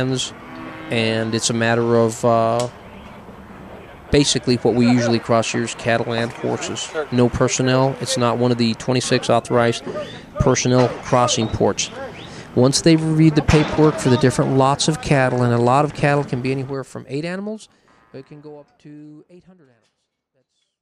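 Nothing stood out on listening, and the gentle fade-out over the last few seconds comes in smoothly, with no click or hard edge.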